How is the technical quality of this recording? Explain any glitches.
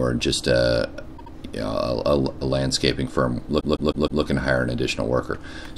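The recording has two stutters caused by repeated frames. At 1.16 s, a block of about 78 ms plays two extra times, ending at 1.32 s and adding 157 ms. At 3.59 s, a 157 ms block plays four extra times, through 4.22 s, adding 627 ms. The compressed frames were written or sent more than once. The decoder replays the same slice each time. Each run is heard as a stuttering loop, and the audio runs longer by that amount.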